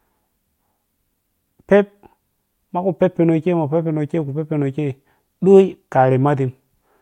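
Nothing stood out as a technical fault on listening to the speech.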